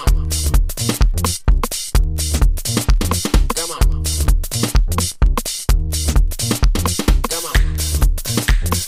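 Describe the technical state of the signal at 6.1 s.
At 6.1 s the signal sits inside a run of word clock ticks lasting from 0.25 s to 8.83 s. The receiving device is running on its own clock, not locked to the sender's, drifting by something like 50 parts per million. Each time the two clocks slip past each other, a single sample is dropped or repeated. The result is a sharp tick roughly every 0.4 s, around thirty across the span, varying in strength.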